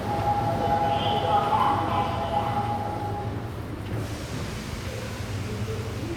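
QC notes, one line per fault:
No technical faults detected.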